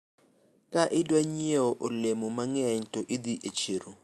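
No technical faults can be heard in the speech. It has passed through a call path working as intended, with the top end stopping at around 12 kHz, which fits the Opus codec at 64 kbps.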